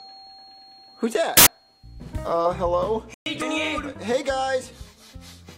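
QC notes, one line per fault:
1.37–1.47 s, corrupt FLAC frame: flipped bits went unchecked, so prediction ran on wrong values across two damaged frames.
3.14–3.26 s, playback stall: the player likely ran out of data or was blocked, so output drops to silence for 120 ms mid-flow.
3.42–3.51 s, compressed frames skipped: whole frames were not played, so the audio jumps ahead about a tenth of a second, with a hard click at the join.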